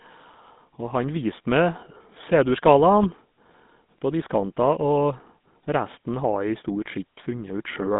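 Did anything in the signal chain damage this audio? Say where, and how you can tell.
Yes. GSM full-rate codec damage runs through the whole speech clip, introduced at the codec stage. The speech has a plainly audible buzzy, gravelly roughness, the mark of a coder that rebuilds the signal from a vocal-tract filter excited by a sparse, regularly spaced pulse train. It discards most of the fine excitation detail, and the result fits a 13 kbps rate. The band runs from about 150 Hz to 3.7 kHz, with nothing audible above that.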